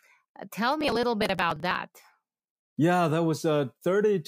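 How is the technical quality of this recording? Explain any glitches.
The recording has one clear technical problem. Processor overload crackle runs from 0.81 to 1.76 s: the processor repeatedly misses deadlines for audio buffers of around 10 ms, and dozens are simply skipped. Each skip is a hard-edged gap, so the speech carries a gritty, tearing crackle until the load eases.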